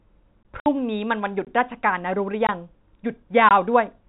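Speech, carried over a G.711 telephone path with its 4 kHz ceiling, is broken by four brief holes at 0.43–0.45, 1.45–1.47, 2.47–2.49 and 3.49–3.51 s, each 20 ms and spaced 1.02 s apart. That regularity marks a gap between chunks, with silence inserted at every join of 1-second blocks. Separately, a 60 ms dropout at 0.60–0.66 s is packet loss filled with silence, which fits six lost 10 ms packets replaced by nothing.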